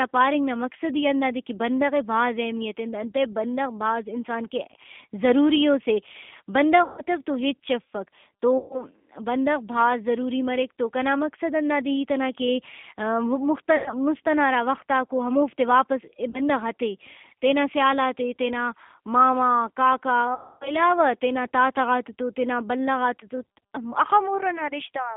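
From start to finish the speech runs through the G.729 codec, consistent with the G.729A variant at 8 kbit/s. The line is band-limited to roughly 150 Hz to 3.5 kHz, so there is no air or sibilant brightness. The codec rebuilds each 10 ms frame from a vocal tract filter, a pitch predictor and a sparse set of pulses, and the damage is plainly audible: a rough, slightly synthetic edge on the voice.

VoIP packet loss concealed by the speech codec occurs five times. At 6.84 to 7.02 s, 140 ms of audio is missing. At 8.58 to 8.84 s, 120 ms is lost just before "بندغ بھاز ضروری مریک". At 13.76 to 13.93 s, 100 ms goes before "مُست ئنا ہرا وختاکو", and at 16.30 to 16.41 s, 40 ms. The longest gap, 260 ms, falls at 20.35 to 20.73 s, ahead of "تینا تاتہ غاتتو تینا". In each case the decoder extends the last pitch and filter state at falling gain, producing a buzzy tone or coloured noise that fades. Because each frame builds on the previous one, the voice stays weak or distorted for a moment after real audio resumes.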